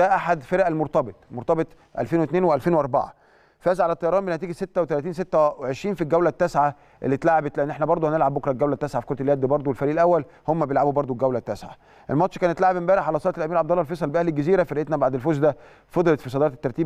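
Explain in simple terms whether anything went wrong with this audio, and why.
Nothing went wrong with this audio, as every moment of it sounds steady and as it should.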